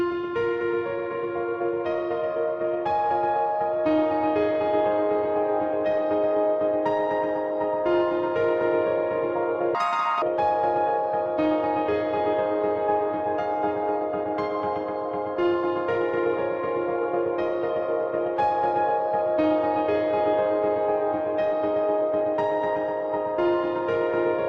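From 9.75 to 10.22 s the audio is read two samples at a time, at double speed. Each pair of samples is taken as one frame. The sound rushes past at 2x and jumps an octave higher.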